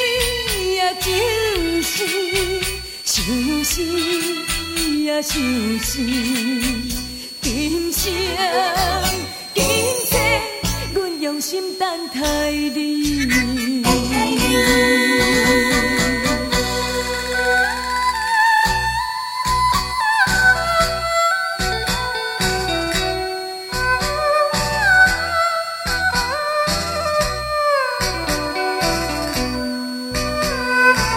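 Throughout, a switching supply whistle sits around 4.2 to 4.7 kHz, roughly 15 dB below the signal: a power converter's audible burst-mode oscillation or beating leaking in as a high tone.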